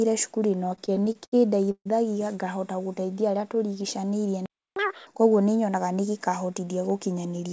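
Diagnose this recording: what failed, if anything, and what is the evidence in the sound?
Repeated stalls (stutter), 0.66 to 1.87 s, network and jitter buffer: eleven gaps, longest 142 ms, filled by stretching the last sound, so audio drags without losing anything.

Playback stall, 4.46 to 4.76 s: output falls silent for about 305 ms mid-flow, likely because the player ran out of data or its thread was blocked.

Catch-up at higher speed, 4.76 to 5.07 s, playback stage: the backlog is resampled at double speed, lifting pitch by roughly ten semitones until timing is recovered.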